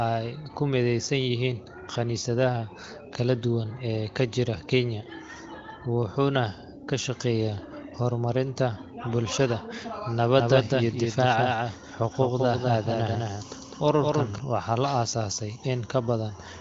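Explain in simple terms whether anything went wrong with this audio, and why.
From 10.38 to 14.38 s the speech has a doubled audio track: a noticeably quieter copy trails about a fifth of a second behind, likely from a second, slower capture path.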